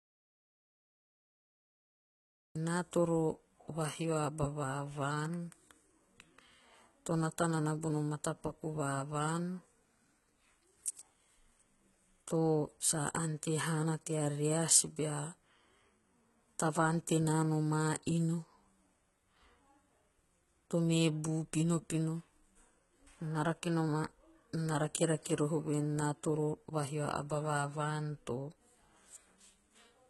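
The clip opens in an audio dropout to silence lasting until 2.55 s: no room tone at all, likely from a lost input while recording continued. Throughout, the speech carries heavy HE-AAC compression damage, likely from a very low bitrate, near 16 kbps. Sibilants sound gritty and metallic from the rebuilt treble, with nothing above 11.8 kHz.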